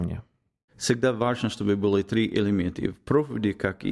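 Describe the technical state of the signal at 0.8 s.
At 0.8 s the speech signal is intact, with no audible dropout, distortion, clicks or other fault at that moment.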